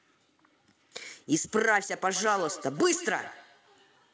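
Speech with feedback echo between two devices from 2.05 s to the end: each word returns about every 150 ms, thinner and more ringing, peaking about 17 dB below the speech. A second device in the room replays the call, and the first device's microphone re-sends that sound, which its echo canceller does not remove.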